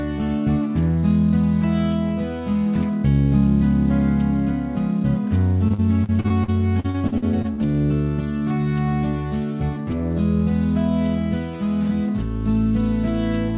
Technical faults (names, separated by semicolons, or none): repeated packet loss (robotic sound)